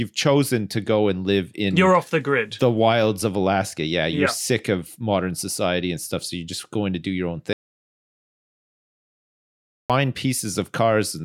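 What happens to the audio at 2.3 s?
Nothing goes wrong at 2.3 s; the audio runs through that point intact, with no dropout, click, glitch or other fault.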